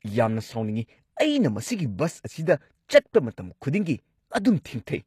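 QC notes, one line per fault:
Throughout, HE-AAC compression: the speech carries plainly audible codec damage, and nothing survives above about 14.9 kHz. The treble sounds synthetic, with s sounds coming out gritty and metallic or lispy. The likely cause is spectral band replication: only the lower spectrum is properly coded, and the top is rebuilt by copying lower bands upward under a coarse envelope, so harmonics fail to line up across the crossover. The degree of damage fits a bitrate around 24 kbps.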